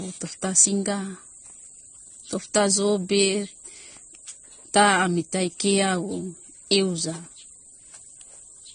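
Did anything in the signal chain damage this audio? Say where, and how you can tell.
Yes, at the codec stage. Throughout the speech, nothing is heard above 9.7 kHz, and two kinds of lossy artefact overlap. This is transcoding between lossy codecs, likely low-bitrate MP3 re-encoded as AAC-LC. The second encoder coded the first's artefacts, added its own, and kept the cut-off.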